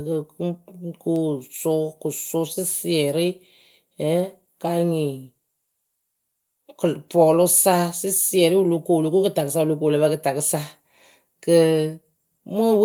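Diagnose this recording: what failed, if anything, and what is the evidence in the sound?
Nothing in the recording stood out on listening as a failure at any stage of the chain.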